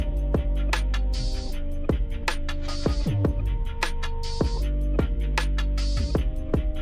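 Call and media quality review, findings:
No audible faults found.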